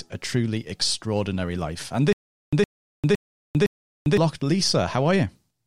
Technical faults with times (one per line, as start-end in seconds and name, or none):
2.13-4.17 stutter with silent gaps